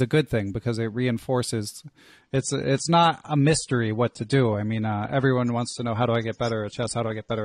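At 2.22 s, right after "thing because it reinforces", the speech switches abruptly to a duller, grainier sound that lasts to the end. This is an adaptive stream at a lower bitrate: the player moved to a cheaper encoding, consistent with AAC falling from about 96 to 32 kbit/s. Nothing above 9.7 kHz survives, and swirly codec artefacts appear. Unlike a dropout there is no gap, and unlike a plain filter the band-limiting brings new artefacts.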